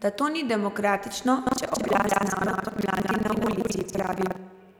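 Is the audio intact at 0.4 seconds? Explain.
Yes, the speech is intact at 0.4 seconds, with no audible dropout, click or distortion at that moment.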